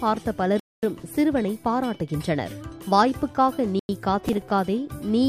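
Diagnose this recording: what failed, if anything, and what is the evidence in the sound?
Bluetooth stall, at 0.60 to 0.83 s and again at 3.79 to 3.89 s: the sound cuts to silence for 233 ms, then 96 ms, before resuming. This is the wireless playback link, likely interference delaying packets until the headphones' buffer ran empty.

Processor overload crackle, 4.29 to 4.49 s, at the driver or buffer stage: a brief burst of gritty crackle rides on the sound. Around seven deadlines were missed, fitting buffers of about 5 ms, and each gap repeated old audio with hard edges.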